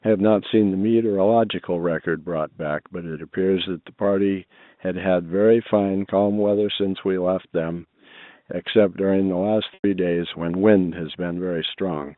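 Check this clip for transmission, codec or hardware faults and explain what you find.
One transmission fault stands out: a packet loss with pitch repetition from 9.74 to 9.84 s. The speech briefly turns into a held, buzzy tone that fades away before the speech resumes with a soft cross-fade. About 100 ms of audio went missing, which fits five lost 20 ms packets. To cover the hole, the receiver kept replaying the last pitch period it had received. It then tapered the repeat down, because the gap outlasted what repetition can disguise. The band-limited telephone sound comes from G.711 A-law coding, and that coding is not at fault.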